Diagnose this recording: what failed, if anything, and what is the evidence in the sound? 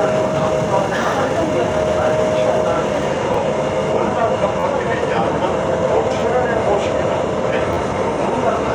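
At the driver/buffer stage, new audio arrived late and the device replayed its last buffer. This repeated buffer fault occurs at 3.34 s, 4.60–4.63 s, 6.20–6.22 s and 7.73–7.77 s. Each 11.6 ms repeat fits a 512-sample buffer and produces a click or brief buzz.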